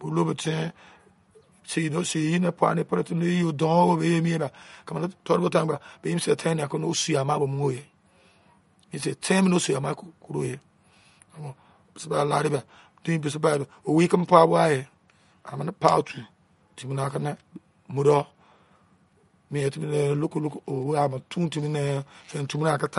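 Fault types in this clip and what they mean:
MP3 compression: The speech sounds plainly watery and swirly, with metallic chirps on s sounds. On a spectrogram, a hard flat ceiling at 11.2 kHz sits above speckled gaps where weak bands flicker frame to frame. This likely comes from MP3 encoding at a low bitrate, around 48 kbps.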